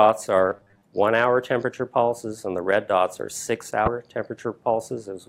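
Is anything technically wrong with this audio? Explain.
Yes, there are two faults. From 0.50 to 0.82 s there is robotic sound from repeated short buffers. The audio turns into a rigid 100 Hz buzz, with roughly half of it repeated. This is likely from audio arriving too late and each short 10 ms chunk being replayed. From 3.84 to 3.88 s, damaged data in a compressed stream causes a brief disruption. The decoder misreads the corrupted frames, loses sync and searches for the next frame header.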